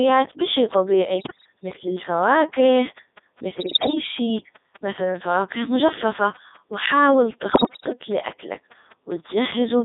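From the start the speech runs through the Codec 2 vocoder, heavily damaged and with the robotic, buzzy timbre typical of its 3.2 kbit/s mode. Only pitch, voicing, energy and a coarse envelope survive, and the decoder rebuilds the sound from sine waves. A spectrogram shows neat, overly regular harmonic stacks confined to about 250 Hz to 3.7 kHz. The waveform looks smooth and periodic and no longer resembles the original.

Bit errors on digital voice radio then strike three times, at 1.18 to 1.46 s, 3.60 to 3.95 s and 7.52 to 7.93 s. Corrupted bits make each affected frame's pitch, level and voicing jump, so the voice breaks into warbling bleeps and gibberish. On a spectrogram the harmonics lurch in spacing from frame to frame. The waveform shows abrupt level steps, and the error rate sounds like roughly 5 to 7 percent.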